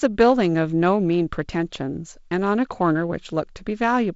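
No technical faults can be heard in this speech.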